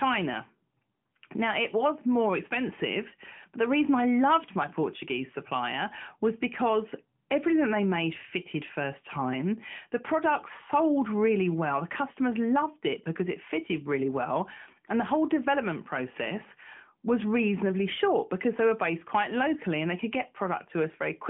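Nothing stood out on listening to this speech recording as it came over the narrowband mobile path.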